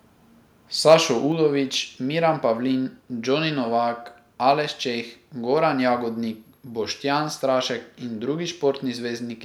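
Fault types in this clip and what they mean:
microphone overload: harsh crackle from 0.87 to 0.94 s as peaks are flattened, likely input gain pushing the converter about 3 dB past its limit.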